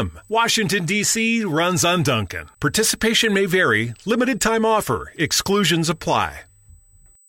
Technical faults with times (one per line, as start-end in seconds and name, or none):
0.00-7.29 USB whine